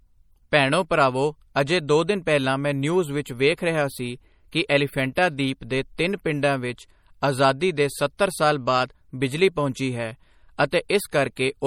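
MP3 compression runs through the whole recording, and it is plainly audible. The speech has a watery, swirling quality, which is likely the result of a low-bitrate encode, consistent with something around 48 kbps. Starved of bits, the encoder keeps only the spectral lines its hearing model ranks highest. Quieter detail flickers in and out between frames, and consonant edges blur. The band stops at 19.5 kHz, where the encoder cut the top end.

Pre-echo appears at 10.71 s, just after "ਬਾਅਦ ਬਿਜਲੀ ਪਹੁੰਚੀ ਹੈ". A brief hiss of about 17 ms runs ahead of a sharp onset. The codec spread its quantisation noise across the whole transform block. The noise was sized for the loud attack near the end of that block, so it also spilled into the quiet moment before it. The result is a smear leading into a softened, less crisp attack.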